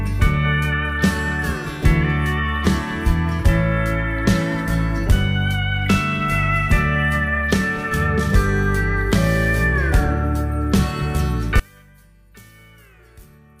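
One channel inverted, from 11.6 s to the end: the sound collapses by about 28 dB into a faint remnant. This is likely one stereo channel flipped in polarity, so the material common to both sides cancels when summed, leaving only their difference.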